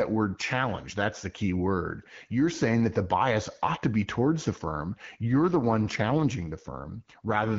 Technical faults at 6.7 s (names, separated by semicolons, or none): AMR rate drop